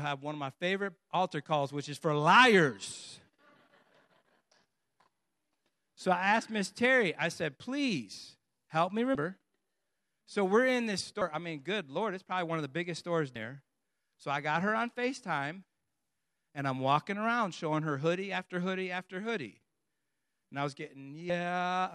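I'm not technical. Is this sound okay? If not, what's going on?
No. Compressed frames are skipped four times: at 9.15 s after "said please help me", at 11.21 s between "we're in this" and "I mean good", at 13.35 s after "of the biggest stores", and at 21.29 s. Each time, small chunks of the compressed speech never reach your ears, so the voice jumps ahead by roughly 0.15 to 0.3 seconds. The chunks overlap slightly, so each gap sounds like a quick smudge rather than a sharp click.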